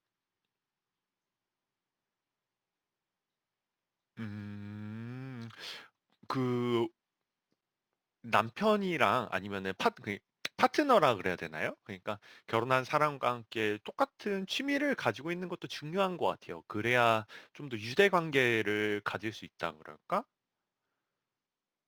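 All the way through, the speech carries crude rate conversion. Samples were simply repeated instead of filtered, which fits a jump from 44.1 to 48 kHz, leaving a gritty fizz roughly 25 dB down.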